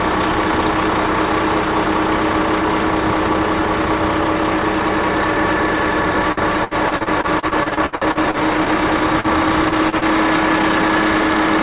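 From 6.32 to 8.69 s, repeated packet loss (robotic sound) sets in: more than a dozen holes, the longest 66 ms, each patched by stretching the preceding sound, so about a quarter of that span is synthetic. The fills follow one another closely, giving a choppy sound with pieces missing.

Short concealed packet loss then appears as four isolated events: at 9.20–9.27 s, 9.69–9.74 s, 9.89–9.95 s and 9.98–10.04 s. Each has roughly 30 ms missing, filled by continuing the last sound and cross-fading back. Unlike the earlier stretch, these are heard as single brief smears or wobbles. Throughout, the band stops at 4 kHz, which fits a G.711 call codec.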